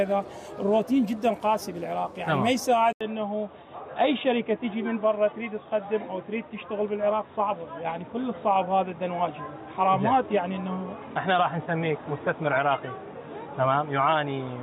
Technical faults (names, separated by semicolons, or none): input switched to a poorer device